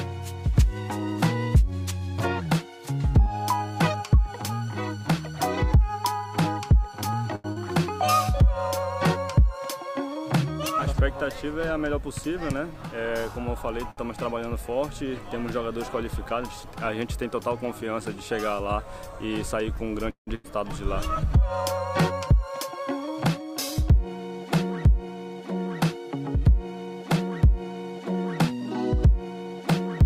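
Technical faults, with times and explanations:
7.35–7.47 s, short stall from a late packet: a packet arrived late and the jitter buffer ran dry, so the receiver held the last sound for 88 ms and then resumed from the same point. Nothing is lost, but the sound is briefly drawn out with a faint buzz.
7.52–7.59 s, short concealed packet loss: 40 ms of audio never reached the decoder in time. The receiver extended the preceding sound for 38 ms and blended back into real audio, which leaves a brief smear where the missing material should be.
11.70–12.90 s, jitter buffer speed-up: the buffer had built up excess audio, so the receiver cut short pitch-period segments repeatedly to shed about a tenth of a second. Playback runs at 107% speed with unchanged pitch, which makes this stretch sound noticeably hurried.
13.91–14.00 s, short stall from a late packet: another late packet emptied the jitter buffer. 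The receiver stretched the last sound for 65 ms until the packet came in, then continued without loss, giving a short held, slightly buzzy sustain.
20.10–20.30 s, call audio freeze: the sound stops moving forward and the last fragment is continued for 168 ms, fading into 110 ms of silence before playback resumes where it paused. This is likely packets held up in transit, leaving the jitter buffer empty.
20.35–20.47 s, skip ahead: right after the freeze, playback jumps forward to recover the added delay. Around a fifth of a second of audio is dropped, with an 89 ms patch joining the two sides almost directly, so material is audibly missing.
22.12–24.06 s, jitter buffer speed-up: the receiver again trimmed short pitch-period pieces to drain surplus buffered audio, removing around a twentieth of a second. At 102% speed with pitch unchanged, the hurrying here is slight.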